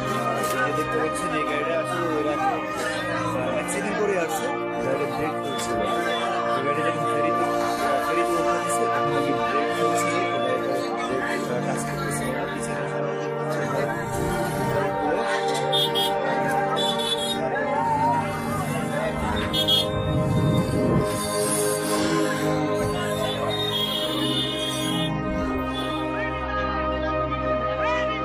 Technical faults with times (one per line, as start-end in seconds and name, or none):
25.89 damaged data in a compressed stream